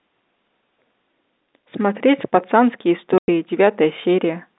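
Packet loss filled with silence cuts the speech from 3.18 to 3.28 s: a 100 ms gap, consistent with five 20 ms packets going missing. The receiver played nothing in their place, so the narrowband telephone-coded speech drops out abruptly, with hard edges at both ends.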